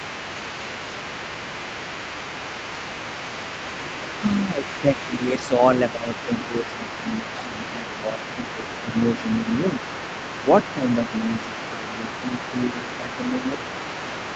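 Throughout the clip a second voice runs faintly underneath, roughly 15 dB below the main talker. This is the other side's voice leaking through, likely loudspeaker echo the canceller left behind. It is an added voice, not a change to the main one.

From 4.21 to 9.81 s, and again from 10.36 to 13.65 s, the main talker's level dips by up to roughly 10 dB in patches. The patches total about three seconds in the first stretch and about a second and a half in the second. This is speech suppressed in double talk, likely the canceller turning the talker down while both sides spoke. The fault lies in the main voice losing level, not in anything added. Across all of it, nothing is heard above 8 kHz, consistent with the call's Opus path.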